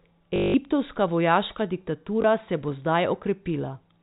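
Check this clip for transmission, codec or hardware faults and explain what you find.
Two packet-loss dropouts, concealed by repeating the last packet. At 0.36 to 0.54 s, a 180 ms gap is filled by replaying the same short segment, so the sound buzzes at 50 Hz, which fits 20 ms packets. At 2.22 s, just before "se bo", a single 20 ms repeat gives a small blip, heard through the 4 kHz telephone band of the G.711 coding.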